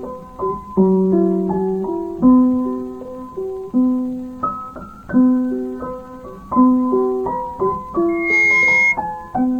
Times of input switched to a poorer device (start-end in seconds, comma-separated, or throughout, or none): none